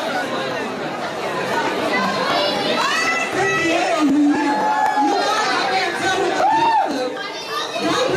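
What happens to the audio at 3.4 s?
Nothing goes wrong at 3.4 s: the audio carries on intact through that moment, with no dropout, click or other disturbance.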